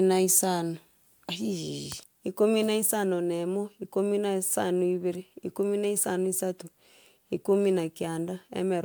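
No technical faults can be heard anywhere in the recording.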